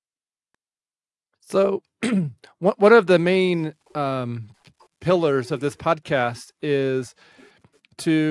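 No faults are audible anywhere in this speech recording; nothing in it calls for attention.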